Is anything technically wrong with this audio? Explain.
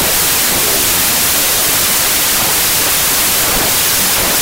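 Yes. A wrong sample width affects the whole clip. Data written as 32-bit integers are read as 16-bit, splitting each sample into a real top half and a noisy low half. The speech plays at half speed, an octave low, under loud hiss. The waveform looks dense and filled in, and the spectrogram shows a bright noise floor over faint, compressed harmonics.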